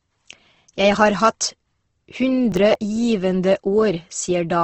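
The speech has likely been through Opus compression in its music mode at a low bitrate, around 16 kbps judging by the damage. Nothing reaches above 8.2 kHz, and the voice comes across plainly rough and grainy, its tones smeared into a noisy texture throughout.

From 2.52 to 2.75 s, processor overload crackle appears: the processor missed a short run of deadlines, which sounds like a handful of buffers near 10 ms each. The missed audio is dropped, leaving hard-edged gaps heard as a gritty burst of crackle.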